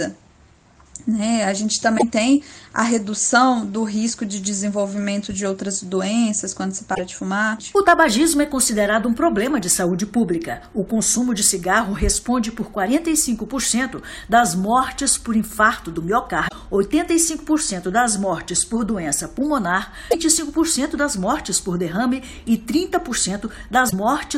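Damaged data in a compressed stream makes the decoder misread frames and lose sync, giving brief chirps or blips at 1.95–2.03, 6.91–7.00, 16.45–16.53, 20.08–20.15 and 23.86–23.93 s.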